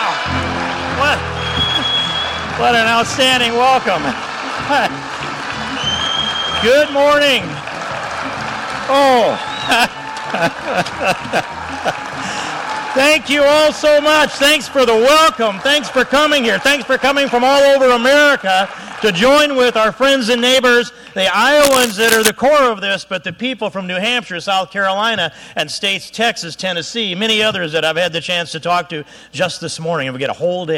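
From 21.63 to 22.30 s, a dense, uneven scratching rustle sits just under the sound: cable scratch noise, likely a worn connector flickering as it moves.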